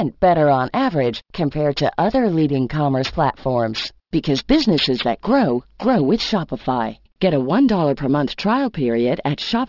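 Aliasing runs through the whole clip: the speech was resampled down without an anti-alias filter, with the sound pointing to a drop to 12 kHz. Content above 6 kHz folds back as gritty, metallic sibilants, fairly strong rather than faint. A plain low-pass would only dull them.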